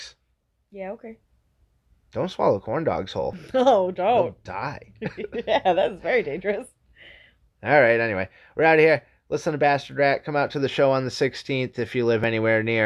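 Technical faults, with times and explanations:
3.33 s, 4.84 s and 12.24 s, dropped buffer (overrun): each is a jump where the speech skips forward, with no gap of silence. The likely cause is the recording software missing a buffer before the hardware overwrote it, splicing out around 10 ms of audio.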